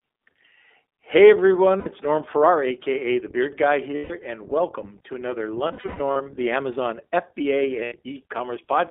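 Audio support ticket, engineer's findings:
iLBC codec, throughout the 9 s clip. Band limited to roughly 250 Hz to 3.6 kHz, nothing above. Speech clear but rough, slightly synthetic; coding damage plainly audible. Each frame's excitation coded independently; sound fits the 20 ms frame mode at about 15 kbps. Probable component: narrowband VoIP leg.

Lost iLBC frames, 1.80 to 1.88 s. 60 ms held, buzzy vowel, consistent with three dropped 20 ms packets. Decoder repeats last pitch cycle mixed with noise. Clean recovery straight after; frames stand alone.

Lost iLBC frames, 3.96 to 4.12 s, just before "and welcome to another". 140 ms concealment, repeated pitch cycle plus noise, fading over the gap. Voice correct again immediately.

Lost iLBC frames, 5.68 to 6.22 s, just after "and welcome to another". Bursty loss: 340 ms concealed, scattered across about half a second, longest run about 150 ms. 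Repeated buzzy or breathy fill, fading on longer runs. Probable component: network path, packet loss.

Lost iLBC frames, 7.84 to 7.94 s. 80 ms held buzzy vowel from pitch-cycle repetition with noise. Fits four missing frames. Instant recovery.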